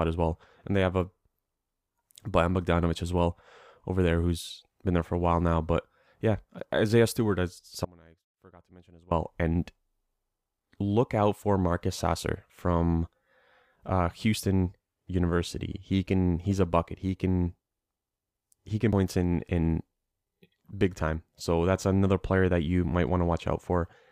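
From 7.85 to 9.11 s the speech drops out to a faint residue, about 25 dB down, for roughly 1.3 s. The signal was likely lost while the path stayed live.

At 18.93 s, between "he can" and "in in", damaged data in the compressed stream throws the decoder out of sync. It gives a brief blip.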